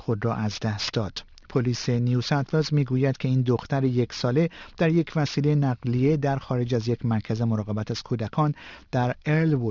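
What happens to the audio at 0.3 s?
At 0.3 s the audio has aliasing, present throughout the clip. Content above about 6 kHz was not filtered before the rate dropped, which points to a 12 kHz rate. It folds back as unrelated tones, roughly 20 dB down, sounding gritty and metallic.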